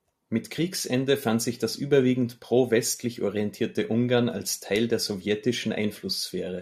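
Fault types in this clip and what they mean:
Compressed frames skipped: around 0.58 s the decoder drops whole blocks of compressed audio, either missing from the stream or rejected as corrupt, so playback lurches forward by roughly 40 ms, about two frames' worth, which fits a frame length near 21.3 ms. The jump comes just before "fand sich das überwiegend".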